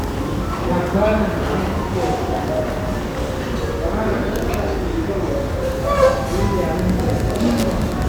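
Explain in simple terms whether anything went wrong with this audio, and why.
From 6.74 s to the end, there is Wi-Fi interference: a steady ticking about ten times a second, every 102.4 ms, sitting well below the main sound. A nearby Wi-Fi radio's regular beacon signal is leaking into the audio circuitry and being heard as clicks.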